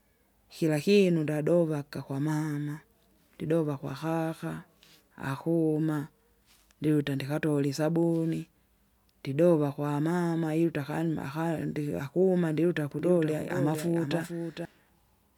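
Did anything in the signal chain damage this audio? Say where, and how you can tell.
Yes: a second capture path or misaligned edit likely mixed in a doubled audio track from 12.99 to 14.65 s, after "ndiakuma ndiluta": a dry copy about 5 dB quieter trails about half a second behind, starting and stopping abruptly.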